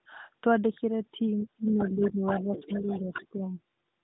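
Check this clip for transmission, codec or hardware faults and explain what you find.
Two echo-canceller problems overlap in the middle of the speech. From 1.44 to 2.22 s and from 2.41 to 3.41 s, speech suppressed in double talk, likely from the canceller ducking both talkers at once, pulls the voice down by up to about 25 dB, then about 10 dB, in short pieces. Unlike a network dropout, the dips follow the other talker. From 1.68 to 3.27 s the other side's voice leaks through, likely residual loudspeaker echo, sitting about 10 dB under the main voice. It is a second talker rather than a repeat of the first.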